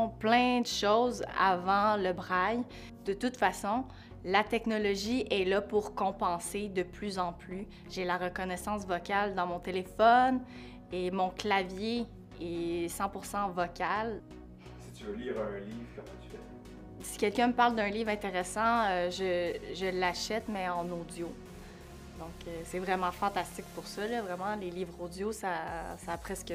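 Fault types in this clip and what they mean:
No technical faults can be heard anywhere in the signal.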